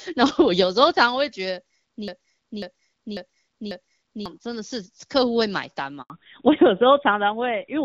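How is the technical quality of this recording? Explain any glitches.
The recording has three glitches, all after the first two seconds of this speech clip, where the HD Voice sound degrades in stages.

From 2.08 to 4.26 s there is a broken-record loop: a 0.54 s fragment plays four times back to back. A stalled player or stream likely kept resending its last buffered piece, so the real speech for that stretch is lost. A waveform shows four identical blocks in a row.

At 6.02 to 6.10 s a handover gap cuts the sound for 80 ms. No frames arrived while the call switched networks, so the audio decays quickly to silence. It appears as a flat line in the waveform and a blank vertical strip on a spectrogram.

From 6.10 s to the end there is a fallback to narrowband. Everything above 4 kHz disappears, and the voice turns duller and rougher, which fits a drop from AMR-WB to AMR-NB at about 7.4 kbit/s. 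On a spectrogram the upper band is abruptly empty from that point.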